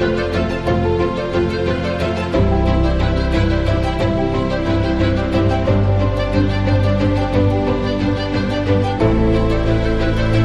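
No technical faults are audible.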